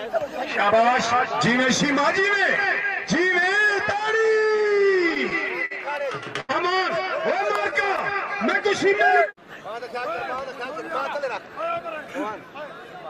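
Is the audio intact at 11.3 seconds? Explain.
No, a jitter buffer speed-up runs from 10.52 to 12.09 s. With excess audio queued, the receiver repeatedly cut out short pitch-period pieces, about a tenth of a second in total, so the sound plays about 7% faster at unchanged pitch and feels slightly hurried.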